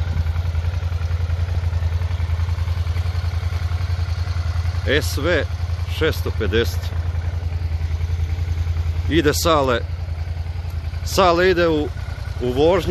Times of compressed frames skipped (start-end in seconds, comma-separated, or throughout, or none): 1.54, 4.42, 6.92, 11.97